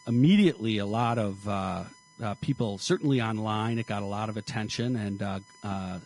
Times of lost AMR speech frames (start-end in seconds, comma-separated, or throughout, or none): none